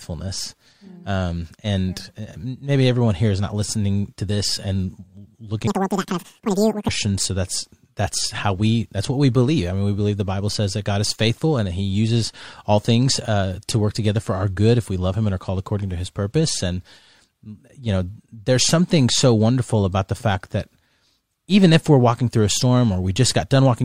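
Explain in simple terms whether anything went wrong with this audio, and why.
From 5.67 to 6.89 s, the audio was read two samples at a time (double speed). Speech plays twice as fast and an octave higher.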